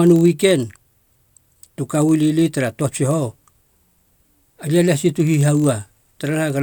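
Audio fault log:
Throughout, block size mismatch (padded): slightly short blocks are zero-filled, fitting 1024-sample reads, leaving tiny gaps that buzz at 43.1 Hz; speech runs at 0.999 speed.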